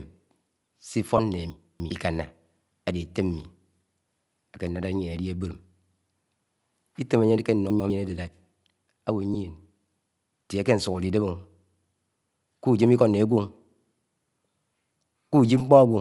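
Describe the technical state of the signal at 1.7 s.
At 1.7 s the speech sits inside a jumbled stretch from 1.5 to 1.9 s. These are chunks out of order. A 100 ms chunk plays three chunks late, after audio that should follow it. Nothing is missing, but the sequence is scrambled. There are three hard joins.

Bluetooth LC3 compression is also present at this point, as across the clip. The upper spectrum sounds thinned and noise-filled, giving a breathy, grainy edge. The damage is plainly audible, which fits LC3 at 48 kbps with 7.5 ms frames, likely a Bluetooth link.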